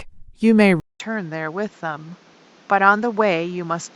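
At 0.8 s a 200 ms gap, then duller, noisier speech cut above 7.6 kHz: likely an input switched to a poorer device, not filtering.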